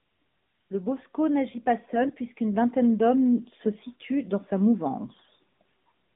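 Near the end, from 5.12 to 5.29 s, AMR bit errors hit the speech for about 0.17 s, roughly eight 20 ms frames, at a few percent of bits. Flipped low-priority bits misplace the excitation pulses and skew the fine pitch, gain and spectral values, so pitch and level hold but the sound turns hoarse and gargly. A spectrogram shows smeared, ragged harmonics and noisy fill, still inside the AMR-NB narrowband codec's 150 Hz to 3.6 kHz band.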